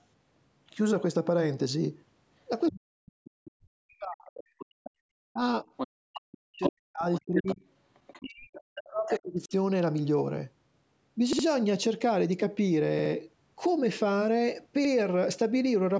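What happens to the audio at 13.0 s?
At 13.0 s there's a repeated buffer. From 12.99 to 13.12 s new audio didn't arrive in time, so the same 64 ms chunk of speech, which fits a 1024-sample buffer, plays three times in a row with a hard join at each repeat. It comes across as a quick stutter, with little or nothing of the speech lost.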